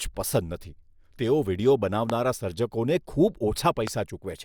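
A voltage step or pulse, likely from a plug, switch, static discharge or driver glitch, was added to the signal twice, giving two loud pops. The first lands from 2.10 to 2.12 s, just after "તેઓ વીડિયો", and the second from 3.87 to 3.90 s. Each is a single sharp pop, far louder than the speech, lasting about 20 ms, with the speech carrying on unbroken beneath it.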